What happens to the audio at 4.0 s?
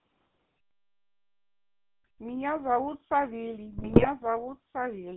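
At 4.0 s the sound is near the end of a burst of GSM bit errors running from 3.78 to 4.07 s. Corrupted bits reach the decoder, so the filter, pitch and gain values it rebuilds each frame are wrong. The spectrum twists and the level jumps from frame to frame, which is heard as squawks, pops and a gargling break-up. The pattern fits 14 damaged 20 ms frames in a row. Plain packet loss would instead leave gaps or smoothed-over repeats, not these garbled, uneven outbursts.

Under the burst, and through the whole clip, runs the GSM full-rate codec. The band is limited to about 150 Hz to 3.4 kHz, and the coarse pulse-driven excitation gives the buzzy, gravelly roughness typical of a 13 kbps GSM call. This roughness is steady rather than bursty, which separates it from the error damage. It also differs from ordinary narrowband filtering, which dulls the sound without adding grit.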